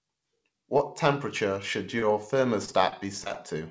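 Speech, carried over a call path with nothing above 8 kHz, consistent with a G.722 codec. Short concealed packet loss hits at 0.78 to 0.81 s, just before "temperature should", and again at 1.99 to 2.04 s, just after it. About 20 ms of audio is missing each time. The receiver patches it by continuing the last sound, leaving a brief smear. Repeated packet loss follows from 2.66 to 3.37 s. Six gaps, the longest 25 ms, are each filled in turn, making the speech choppy.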